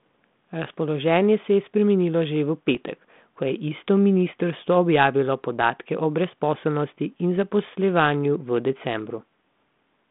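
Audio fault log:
2.75–2.77 s and 7.37 s, bit errors on an ADPCM link: a sharp pop with a short, rough burst and a brief change in level, the first much longer than the second, with a higher error rate. Flipped bits throw off the decoder's predictor and step size, so each hit rings on for a few milliseconds before settling. The error rate sounds like a small fraction of a percent, on a link that points to 32 kbit/s G.726 telephone-band coding.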